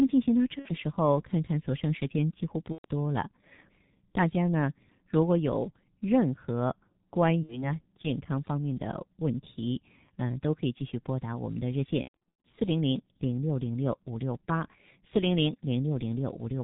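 Muffled, hoarse speech with smeared consonants and nothing above 4 kHz runs through all of it, the sound of heavy G.723.1 codec coding at about 6.3 kbit/s, whose 30 ms frames and slow model updates blur detail. VoIP packet loss concealed by the speech codec stretches the audio into a fading tone or coloured noise at 0.59–0.69 s, 2.72–2.85 s, 7.43–7.78 s and 12.02–12.42 s, where the decoder stretches its last pitch and filter across gaps of 60 to 120 ms. At 12.02 s, 300 ms of losses are scattered over 420 ms, with the longest run 120 ms. Weakness lingers after each gap as the decoder recovers.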